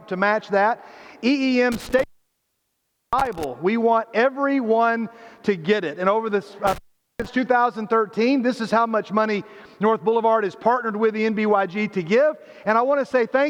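An intermittent contact opens at 1.72 to 3.44 s and again at 6.67 to 7.28 s, cutting the sound for about 1.1 s and 0.41 s. A loose plug or cable breaks the line. Crackle at each edge marks it apart from a clean digital dropout.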